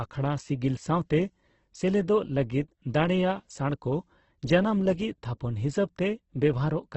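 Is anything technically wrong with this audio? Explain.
Yes. Throughout the speech there is heavy Opus compression damage, and the likely cause is a low-rate Opus encode. Nothing is present above 8.2 kHz, so the top is sharply cut off. When bits run short, this encoder keeps each band's energy but refills weak bands with folded copies of lower ones or with noise. The result is grainy and rough rather than swirly. Tonal parts turn noisy, which fits a bitrate near 12 kbps.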